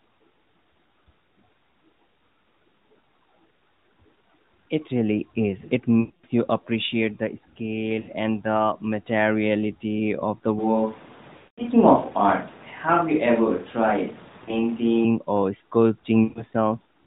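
Speech carried over a narrowband mobile link, whose 4 kHz ceiling and light coding texture fit AMR-NB at around 12.2 kbps, suffers two faults. First, lost AMR speech frames: radio errors corrupted frames, and the decoder filled each gap by repeating the last good pitch and vocal-tract settings at falling gain. The longest runs, about 0.24 s at 6.00 s just before "you appreciate the" and 0.2 s at 11.38 s, stretch into a drawn-out sound that fades to silence, with the voice returning rough. Shorter gaps at 8.00 s before "and the materiality of", 14.44 s and 16.24 s, lasting about 0.04 to 0.12 s, cause brief dips or warbles. Second, from 10.59 s, right after "the materiality of the", until 15.05 s, the sound abruptly turns roomy and hollow, thinner in the bass, a few decibels quieter, with room noise rising to roughly 25 dB below the speech. The likely cause is a switch to a distant microphone after the close one dropped out, and the return at 15.05 s is just as sudden.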